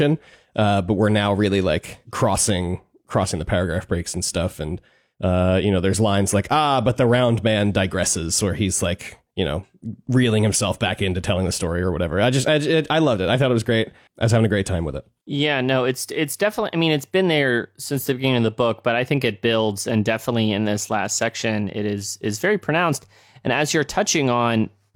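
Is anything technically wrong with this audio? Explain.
No, nothing technically wrong can be heard in this speech recording. There is no point in it where the audio is disturbed or broken.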